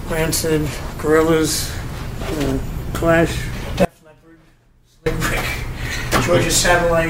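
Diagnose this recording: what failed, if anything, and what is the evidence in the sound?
An audio dropout to a faint residue runs from 3.85 s to 5.06 s: the sound cuts off abruptly for about 1.2 s, leaving only a faint leak roughly 30 dB below normal, then returns mid-flow. The downstream path stayed live, so the break is likely an upstream analogue wiring or connection interruption.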